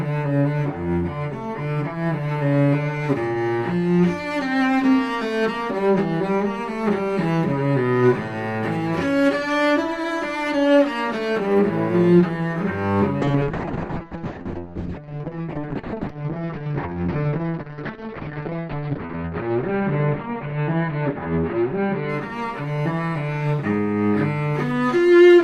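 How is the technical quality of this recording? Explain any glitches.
There's one real glitch, a call bitrate drop from 13.23 to 23.65 s. The bandwidth estimate collapsed, so the encoder coded far more coarsely and cut the top end from 20 kHz to 6 kHz. The sound turns muffled and rough, worst for about 5.6 s, which fits a fall from around 64 kbps to roughly 6 kbps.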